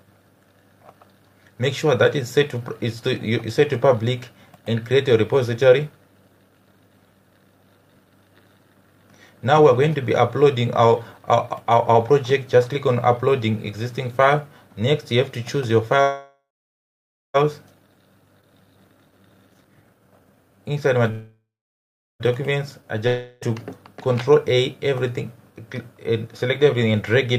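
Two call audio freezes, at 16.01 to 17.36 s and 21.11 to 22.22 s, extend the last sound into a fading buzz that ends in about 0.89 s and 0.74 s of silence. The likely cause is delayed packets draining the jitter buffer, which inserts a gap of about 1.33 s and 1.09 s without losing audio. A skip ahead at 18.41 to 18.44 s drops roughly 0.3 s and joins the two sides almost directly. A jitter buffer speed-up from 18.46 to 21.05 s plays at 137% speed with unchanged pitch, trimming roughly a second of backlog by cutting short pitch-period pieces. A long network dropout at 23.07 to 23.43 s is most likely caused by lost packets. It covers 0.34 s of missing audio with a decaying buzz, and playback resumes past the lost stretch.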